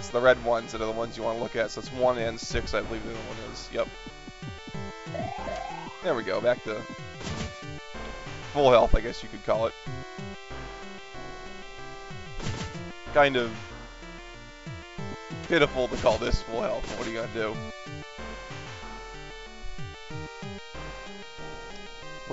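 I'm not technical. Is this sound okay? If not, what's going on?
Yes, this sound is okay; nothing is going on with it that needs fixing.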